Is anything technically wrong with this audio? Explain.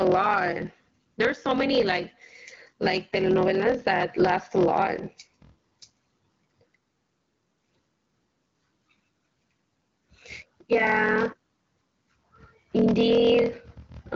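Yes, the speech carries two faults that run through the whole clip.

The first is a block size mismatch with zero padding. One stage delivers shorter blocks than the next one reads, so every block ends in a stretch of silence. That puts a buzz at about 41.7 Hz under the speech and slows it to about 0.889 of normal speed with the pitch roughly unchanged, which fits 1024-sample blocks landing in slots of about 1152. A waveform shows regular flat gaps, and a spectrogram shows thin vertical stripes about 24 ms apart.

The second is gain pumping. The gain swings by around 10 dB, and loud and soft syllables sit unnaturally close in level. The likely cause is input gain set far too high, with a fast limiter or compressor pulling it back on every peak. The waveform's envelope looks flattened. The AMR-WB coding behind this shows as a clean cutoff near 7.5 kHz.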